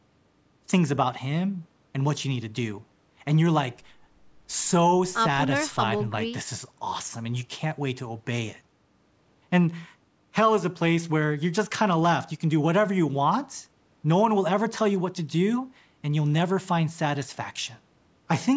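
A speech recording with nothing technically wrong with it, having passed through a call's microphone processing that trims the lowest bass and leaves nothing above 8 kHz.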